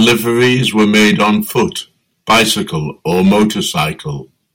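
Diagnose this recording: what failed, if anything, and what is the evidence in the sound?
Hard clipping runs through the whole clip. The speech has a harsh fuzz on every loud syllable, and the peaks sound squared off and crackly. That points to a gain stage, the converter or a fixed-point format conversion being driven by about 11 dB too much. The peaks get sliced flat wherever the signal exceeds full scale, which is roughly one sample in twenty, and those flat tops spray high harmonics across the spectrum.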